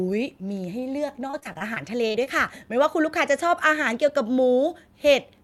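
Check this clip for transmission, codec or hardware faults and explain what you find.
There is one transmission fault. From 1.27 to 2.28 s the speech turns choppy and robotic: repeated packet loss. Ten short gaps, the longest 26 ms, were each patched by extending the last sound, concealing about 18% of that second and leaving a broken texture.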